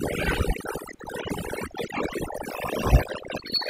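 From the start, the background is turned down and flecked with twinkling specks. That is overdone noise removal: a noise reducer set too strong pushes individual frequency bands down or off near its noise estimate, taking quiet parts of the voice with them.

From 2.50 s to the end, the speech turns high and hurried, running 1.25 times faster and about four semitones higher. This section at the wrong speed was likely played against a mismatched clock, shifting pitch and tempo together.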